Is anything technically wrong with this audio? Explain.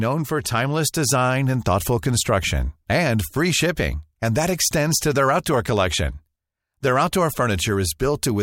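No, no technical faults are present.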